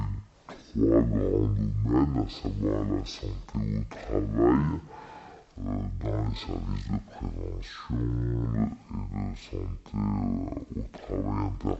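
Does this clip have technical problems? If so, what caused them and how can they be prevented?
Yes. Throughout the clip there's a stereo read as mono fault: the interleaved left and right samples are being played back one after another as one channel, so everything runs at half speed and drops 12 semitones, a full octave. Prevent it by reading the channel count from the file header correctly.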